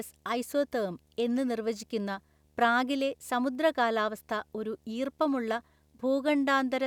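This is a speech clip with video or display buzz running through its whole length. A low buzz sits under the speech at 75 Hz, with a gritty hash of harmonics above it. It stays far below the speech, at around 40 dB down, but it never stops. The cause is a screen or video cable coupling into the audio path. The 75 Hz rate matches the display's field rate, the rate at which it redraws the picture.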